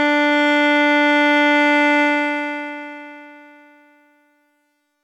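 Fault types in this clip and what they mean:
Truncation distortion on a fade: the fade-out stage discards the low-order bits without adding dither, leaving too few level steps, which fits roughly 11-bit resolution. As the music fades from about 2 s toward the end, the shrinking waveform is forced onto a handful of square steps. The tail turns grainy from 2.02 s, and from 3.53 s to the end it is at its grittiest.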